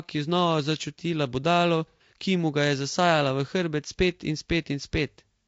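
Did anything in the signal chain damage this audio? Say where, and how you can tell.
Yes, two problems, both at the codec stage. The whole clip has a rough, grainy quality, with noise filling the gaps between harmonics and a thin, synthetic-sounding top band. That's likely low-delay AAC compression, AAC-ELD-style, at around 32 kbps. At that bitrate there aren't enough bits to code the spectrum cleanly.

Then from 1.88 to 2.08 s there's a smeared, noisy patch where the speech loses definition. That's AAC frame loss with concealment. About 120 ms of audio went missing, which fits roughly four frames. The decoder patched the gap by reusing the last good spectrum.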